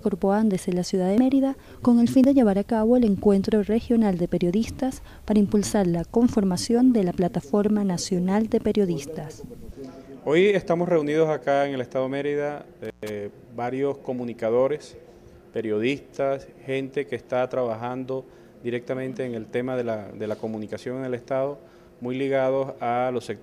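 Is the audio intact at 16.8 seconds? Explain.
Yes, at 16.8 seconds the audio plays through intact, with no dropout, glitch or other fault at that moment.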